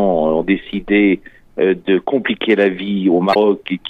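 From 3.31 to 3.36 s, damaged data in the compressed stream knocks the decoder out of sync, giving a brief chirp, squawk, click or short hole as it searches for the next frame.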